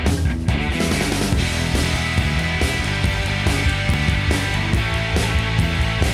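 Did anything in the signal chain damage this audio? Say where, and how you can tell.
Yes. Audio is missing between chunks: brief skips of about 20 ms at 1.96 s and 3.94 s, likely dropped at 2-second buffer handovers and spliced directly together.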